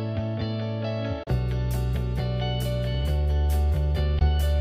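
The audio cuts to silence twice: from 1.23 to 1.32 s and from 4.19 to 4.25 s. The sound picks up further along each time, as if it had kept playing through the hole. This is likely a Bluetooth dropout, where packets miss their delivery window to the headphones and are discarded. The first gap fits two lost packets (about 30 ms of material), and the second fits one (about 15 ms).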